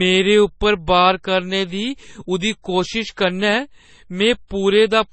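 Throughout, the speech has likely been through transcoding between lossy codecs, an MP3 stage then AAC-LC, both consistent with about 32 kbit/s. The second encoder spends bits re-coding the first one's artefacts, so both sets of smearing are heard together, and nothing remains above 8.3 kHz.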